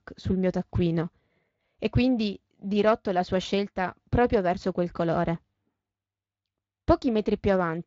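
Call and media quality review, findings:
No faults found; the speech runs through what sounds like a Speex path with only light codec colouring and nothing above 7.6 kHz, consistent with a wideband setting at a bitrate around 24 kbps.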